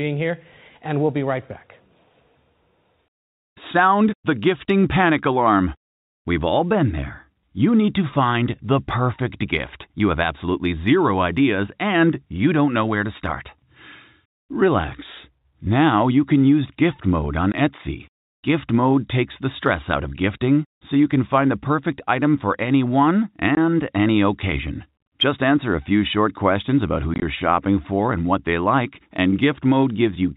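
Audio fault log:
17.52–17.54 s, 23.55–23.57 s and 27.14–27.22 s: packet loss filled with silence. The speech cuts to dead silence for 20 ms at the first two points. At the third, 50 ms goes missing in short gaps spread over 80 ms, none longer than 20 ms. The gap lengths fit 10 ms packets. The receiver put silence where the missing packets should be. The signal stops and restarts abruptly at each gap's edges, breaking into the telephone-band G.711 sound.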